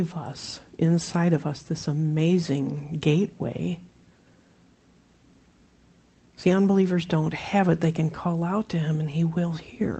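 Nothing technically wrong turns up here; the sound just carries the ordinary character of a call sent over Opus at 24 kbps, which is exactly what that path should give you.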